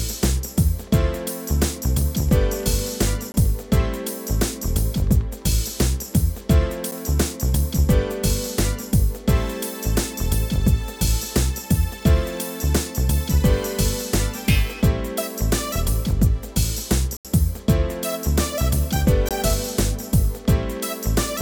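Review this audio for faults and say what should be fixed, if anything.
Four blocks of digital silence occur: 3.32 to 3.34 s (20 ms), a brief one at 6.91 s (about 7 ms), 17.17 to 17.25 s (80 ms), and 19.29 to 19.31 s (20 ms). In each, the sound cuts out and returns with no fade. The 7 ms gap registers as a tick and the 80 ms one as an audible hole. Unlike a concealed network dropout, nothing is smeared or repeated to cover the gap.

To prevent this, give the audio processing enough buffer headroom and priority that it always fills the output on time.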